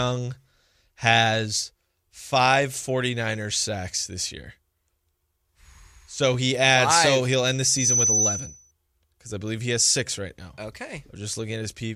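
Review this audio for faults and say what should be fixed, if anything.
Loudspeaker feedback squeal runs from 7.63 s to 8.71 s, starting after "he'll end the" and clearing before "because I believe he". The microphone is picking up the loudspeaker it feeds, and at 6 kHz the loop gain tops one, so that tone feeds on itself. It swells within about a third of a second into a piercing whistle that ends up roughly 5 dB above the speech. To prevent it, lower the monitor gain or move the microphone out of the loudspeaker's coverage, and notch 6 kHz if needed.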